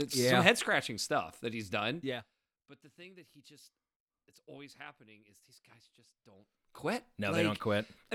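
Zipper noise at 1.95–2.37 s, after "scratching stuff that he's": the level falls about 20 dB in unsmoothed 1 dB steps, roughly forty per second, each one ticking.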